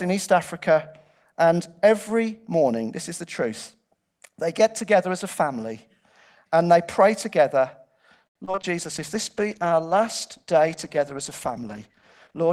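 Right after "and they pray together", from 8.27 to 8.65 s, the connection suffers repeated packet loss (robotic sound): audio data keeps failing to arrive, and each hole is bridged by stretching the previous sound forward. About 42% of that stretch is patched this way, with 158 ms filled in, 80 ms simply missing, and the longest gap lasting 79 ms. The result is choppy speech with small pieces dropped out.

From 8.78 s to 12.45 s there is a call bitrate drop. The bandwidth estimate collapses and the encoder is forced to spend far fewer bits, which fits a fall from about 32 kbps to 14 kbps, held at its lowest for 3.63 s. With so little data, the speech is coded coarsely and loses its upper frequencies. The voice turns muffled and watery, and it stays that way until 12.45 s.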